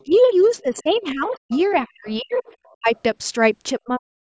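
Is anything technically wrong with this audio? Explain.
Yes. Two faults recur, both likely from an echo canceller on a loudspeaker call.

Other side's voice leaking through, 0.0 to 1.0 s, 1.32 to 1.59 s and 2.08 to 2.76 s: the canceller left residual loudspeaker echo in the microphone signal, so a faint second voice sits roughly 25 to 30 dB under the speech.

Speech suppressed in double talk, 0.05 to 0.15 s, 0.62 to 2.33 s, 2.79 to 2.90 s and 3.79 to 4.16 s: with both sides talking, the canceller also attenuated the near talker. The speech dips briefly and lightly at first, then drops steeply, around 40 dB.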